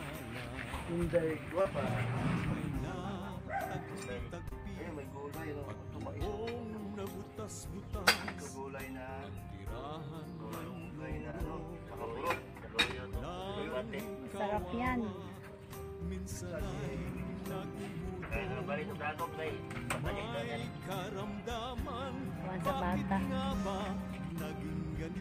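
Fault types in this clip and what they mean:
short concealed packet loss: At four points, 1.61, 4.49, 11.31 and 24.33 s, a short stretch of audio failed to arrive in time for decoding: about 40 ms at the first and about 20 ms at each of the others, consistent with one or two 20 ms packets. The receiver bridged each gap by extending the preceding sound and fading back into the real signal, so each shows up as a brief smear or wobble.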